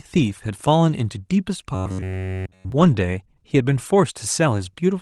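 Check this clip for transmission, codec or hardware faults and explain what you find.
One fault is present: robotic sound from repeated short buffers. It runs from 1.75 to 2.72 s. Across that whole stretch, the speech turns into a rigid, metallic buzz at about 93.8 Hz. The words are still roughly traceable underneath. The likely cause is audio arriving too slowly. The playback side fills each gap by looping a slice of about 10.7 ms. That loop length sets the fixed buzz pitch.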